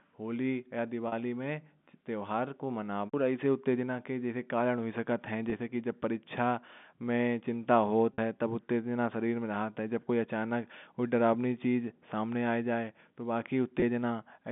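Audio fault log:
1.08–1.12 s, 5.50–5.52 s (after "हो सकते हैं"), 8.14–8.18 s (after "की चिंता"), 13.80–13.82 s: packet loss with pitch repetition. Gaps of 40, 20, 40 and 20 ms, which fit one or two lost 20 ms packets, were filled by looping the last pitch period. That gives a brief held, buzzy tone. On a spectrogram the harmonics freeze into flat lines, and the waveform shows one cycle repeating as it fades.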